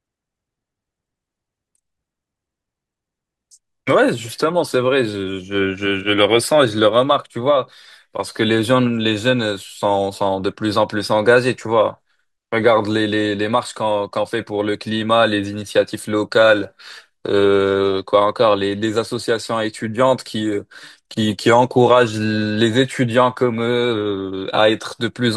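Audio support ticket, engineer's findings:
No audible faults found in the speech recording. No component implicated, nothing to escalate.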